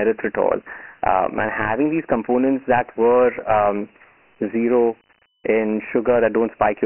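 Speech runs through the whole clip with a thin, boxed-in telephone tone and a gritty, granular hiss that rides along with every syllable and drops away in the pauses, the signature of Dialogic VOX ADPCM. The lows are gone below about 250 Hz and nothing survives above 3.1 kHz, which fits 4-bit samples at 6,000 a second (about 24 kbps). With so few bits per sample, each step only approximates the waveform, so heavy quantisation noise clings to the speech.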